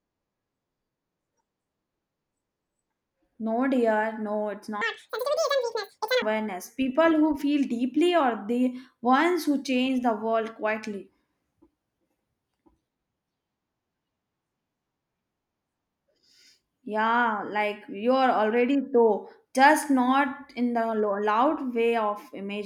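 A speech recording with one section at the wrong speed, from 4.81 s to 6.22 s. For about 1.4 s the audio plays at twice its proper rate, so the talker sounds hurried and chipmunk-like, pitched up by roughly ten semitones, then drops straight back to normal. Because speed and pitch jump together and return together, the likely cause is that stretch being clocked or resampled at the wrong rate during editing or playback.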